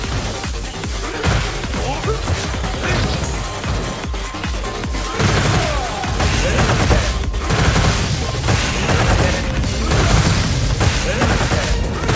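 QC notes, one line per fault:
No faults found anywhere in this recording.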